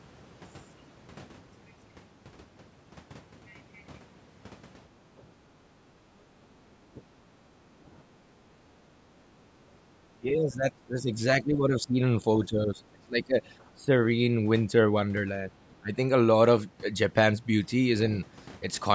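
The room sound behind the speech dips between 5.62 and 6.11 s by about 12 dB, and again at 7.29 to 7.73 s and 8.49 to 8.98 s by about 9 dB. This is background gated by the echo canceller, which pulls the microphone down while the loudspeaker plays and releases it afterwards.

Interleaved with these, the talker's speech sinks or breaks up in short pieces at 6.39 to 7.01 s and 8.13 to 8.21 s, then through a long stretch from 10.2 to 13.39 s, and again at 13.74 to 13.91 s and 15.51 to 15.93 s. Each dip is roughly 15 to 20 dB deep. This is likely speech suppressed in double talk: with both sides talking at once, the canceller mistakes the talker for echo and turns both down.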